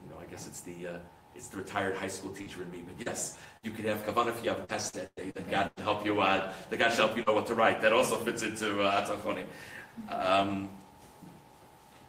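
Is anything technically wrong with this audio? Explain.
Yes, there are three related network faults in this audio.

From 2.41 to 5.79 s there's repeated packet loss with a robotic sound. Packets went missing eight separate times, the longest gap about 102 ms. Each time the decoder papered over the hole by extending the last bit of sound, and the next gap arrived before things settled. A little of it was also patched from redundant data. Roughly 14% of that stretch is guesswork, so it comes out choppy and robotic, with chunks missing.

Around 7.23 to 7.29 s there's a short concealed packet loss. Only a few hundredths of a second failed to arrive in time, and about 34 ms of it was filled by continuing the preceding sound before blending back into the real signal. You hear it as a quick smear or little wobble rather than a clean dropout, and something very brief in there could be swallowed.

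Inside that same moment, at 7.26 to 7.28 s, there's a lost packet rebuilt from error correction. That 20 ms frame was lost, but the following packet carried a low-bitrate backup copy (Opus in-band FEC), and the decoder played that instead. So there's no gap at that point, just a rougher, grainier texture for that instant, since the backup copy carries less detail than the original.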